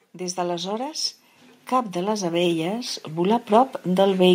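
Automatic gain rising runs from 0.12 s to 4.13 s, nearly the whole clip. The gain control judged the incoming speech too quiet and kept turning its gain up, lifting the level by about 15 dB over those four seconds. Because the gain acts on everything at once, the voice and the background noise swell together, so the room seems to creep closer and louder as the speech goes on.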